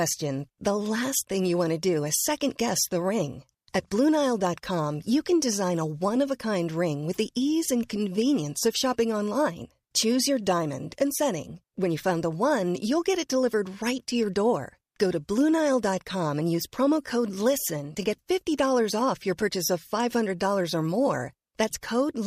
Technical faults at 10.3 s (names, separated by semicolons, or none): none